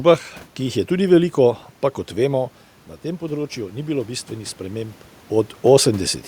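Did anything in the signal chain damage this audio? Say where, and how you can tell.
Yes, automatic gain rising in call processing: after "pa kot vemo na", from 3.03 to 5.6 s, voice and room noise swell together as gain climbs about 5 dB.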